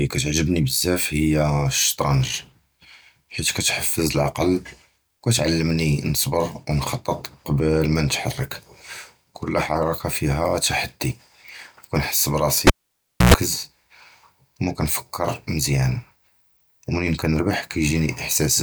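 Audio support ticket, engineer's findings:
Cable pulled and plugged in, 12.67–13.34 s. Pop, about 0.62 s near-silent dropout, then roughly 0.11 s of 60 Hz mains buzz as the plug tip makes contact, then a second pop. Probable component: loose input cable or jack. Waveform: two spikes bracketing a flat gap. Spectrogram: vertical broadband lines, then 60 Hz harmonic stripes.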